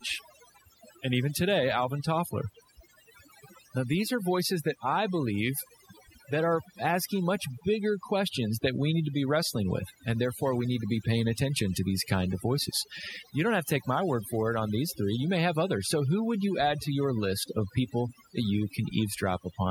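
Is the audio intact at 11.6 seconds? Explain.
No, at 11.6 seconds you're hearing overdone noise removal, present across the whole clip. The reduction clamps down on bands near the noise estimate, leaving near-silent, twinkly gaps.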